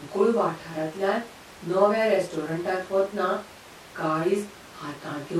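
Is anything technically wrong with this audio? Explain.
No, no technical faults are present.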